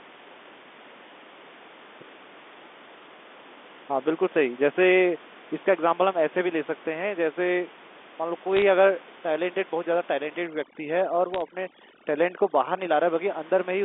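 From 8.57 to 8.62 s a brief burst of sharp ticks and crackle sits on top of the speech, which itself carries on unchanged. These are bit errors on a digital phone line. Flipped bits in the G.711 A-law stream each corrupt one sample, and hits on the sign or upper bits jump the waveform abruptly. The density here suggests an error rate of a few tenths of a percent over a handful of frames.

From 10.47 to 12.96 s the background room noise, which elsewhere sits about 22 dB under the speech, drops and breaks up into twinkling specks. Quieter parts of the speech drop away with it. This is overdone noise removal. The suppressor is set so aggressively that it cuts any frequency band close to its noise estimate, and it removes low-level parts of the speech along with the background noise.

Inside that stretch, from 11.34 to 11.42 s, a second cluster of bit errors adds another short patch of crackling ticks. 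It is lighter than the first, which fits an error rate of around 0.15 percent. The mechanism is the same: single corrupted 8-bit samples that jump out of the 250 Hz to 3.6 kHz telephone band as clicks.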